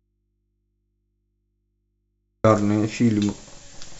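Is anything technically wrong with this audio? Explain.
Yes. From the start until 2.44 s there is an audio dropout to a faint residue, with the speech absent and only low mains hum, roughly 55 dB down, remaining. The likely cause is a lost signal feeding a still-live input. The abrupt return, with hum instead of true silence, separates it from a pause or fade.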